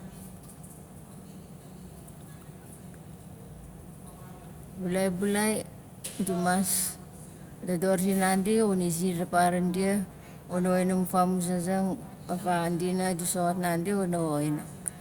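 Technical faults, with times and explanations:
No technical faults can be heard in this speech recording. There is nothing here that calls for a time or an explanation.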